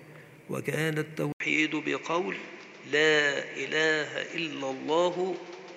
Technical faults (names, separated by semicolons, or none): input switched to a poorer device